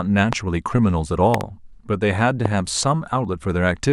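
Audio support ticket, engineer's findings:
Loud pop, three events: 0.33–0.35 s, 1.34–1.43 s (double pop), 2.46–2.48 s. Likely a voltage step from a plug, switch, static or driver glitch entering the chain. Sharp pops roughly 15 dB above the speech, which carries on underneath.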